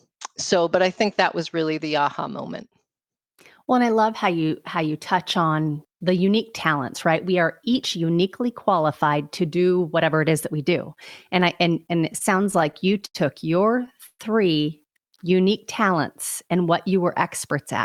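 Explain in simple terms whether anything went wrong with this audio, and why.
Repeated stalls (stutter) run from 11.97 to 13.17 s, just after "I and": eleven brief hitches, the longest 88 ms, where late network packets left the receiver stretching the last sound.

A call audio freeze at 14.06 s lasts about 0.13 s, with the held sound fading into a short silence. The likely cause is packets stuck in transit, so the receiver filled the wait.

A jitter buffer slow-down from 15.08 to 15.48 s, right before "talents and what you", repeats tiny slices of sound to rebuild a reserve. That adds 41 ms and plays at 91% speed.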